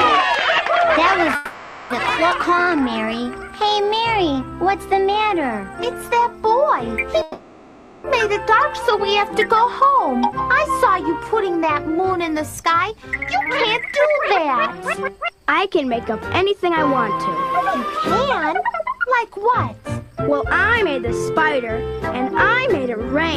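Packets on this call were evidently held up twice, and the jitter buffer likely ran dry each time. At 1.35 s the receiver fills 550 ms by carrying the last sound on as a fading buzz or hiss, until 1.92 s; at 7.22 s it does the same for 820 ms, until 8.06 s. This call audio freeze inserts a gap in the sound, but when playback resumes it picks up where it stopped with nothing lost, leaving the stream that much later. Soon afterwards, at 2.30 s, a stretch of roughly a fifth of a second is dropped while later audio is already queued. This skip ahead joins the two sides almost directly across a brief 10 ms seam, so the sound jumps forward and about 200 ms of material is simply missing. From 2.50 to 4.51 s the buffer, running short, rebuilds its reserve with a jitter buffer slow-down, repeating single pitch periods or slivers of pause over and over. This adds 187 ms and plays the passage at 91% speed without changing pitch, so sounds stretch out and a faint warble can creep in. 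Later the buffer is holding more than its target and trims the excess with jitter buffer speed-up, cutting out short pieces of one or a few pitch periods in rapid succession. This runs from 12.70 to 17.57 s at 109%, from 18.46 to 21.69 s at 112%, each removing roughly 0.4 s, and from 22.24 to 23.00 s at 106%, removing about 50 ms. Pitch stays put while the audio sounds hurried and its timing pushed forward.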